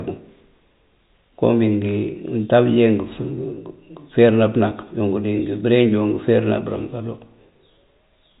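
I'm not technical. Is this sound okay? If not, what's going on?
Yes, no faults; the audio has the narrow, slightly boxy sound of ordinary G.711 telephone coding, with nothing above about 3.8 kHz, which is how a standard landline call is meant to sound.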